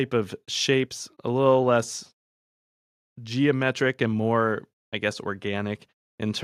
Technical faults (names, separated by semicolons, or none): none